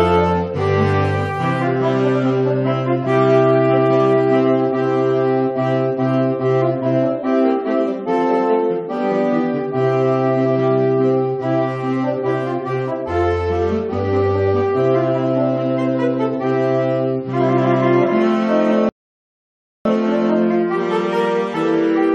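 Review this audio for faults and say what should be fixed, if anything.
There's a rebuffering stall from 18.89 to 19.85 s: the player drained its buffer, went silent for about 0.96 s, then picked up exactly where it stopped, so nothing's missing, just extra time. To prevent it, keep a deeper playback buffer before resuming.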